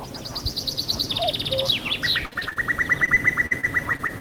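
At 0.95 to 0.97 s, chunks play out of order. A 10 ms chunk arrives one chunk late and plays after the chunk that should follow it. Nothing is lost, but the jumbled order and hard joins make a brief garbled moment.

Repeated packet loss gives a robotic sound from 2.25 to 2.58 s, with five gaps, the longest 58 ms. About 44% of that stretch is patched by stretching the last sound. A second run from 3.06 s to the end has eight shorter gaps, the longest 44 ms. It sounds choppy, with pieces missing.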